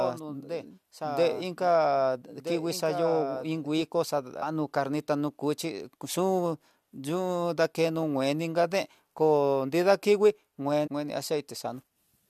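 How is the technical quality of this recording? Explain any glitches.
The recording has two kinds of technical fault: a doubled audio track at the start and two brief decoding glitches from a damaged compressed stream.

From the very beginning until 3.82 s, a doubled audio track is audible: a second, full-band copy of the speech trails the original by around one and a half seconds, about 10 dB quieter. It has no reverberant tail or room colour, so it sounds like a clean second playback rather than an echo, and it cuts off abruptly at 3.82 s. The likely cause is the same signal reaching the mix twice, once directly and once through a slower path.

Damaged data in a compressed stream appears at 4.42 s and again from 10.86 to 10.88 s. Each is a short chirp or blip lasting a couple of hundredths of a second. Corrupted or missing bytes make the decoder misread the affected frames and lose sync, so it produces a burst of garbage and then resumes at the next valid frame header.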